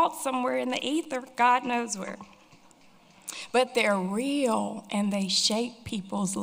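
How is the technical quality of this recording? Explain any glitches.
One glitch stands out: GSM signalling bursts from 0.57 to 1.76 s. A nearby 2G phone exchanging short signalling transmissions is rectified by the audio circuitry, giving a galloping dit-dit-dit of short, about 217 Hz buzzes, roughly 25 dB below the main sound. Unlike steady mains hum, it stutters in irregular groups.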